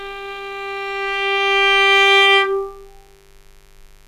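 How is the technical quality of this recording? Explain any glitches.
The recording carries one fault throughout. From start to finish there is a faint mains buzz, a steady raspy hum well below the main sound. Switching spikes at 100 per second of the 50 Hz supply leak in, drawing evenly spaced harmonic lines up into the kHz range on a spectrogram.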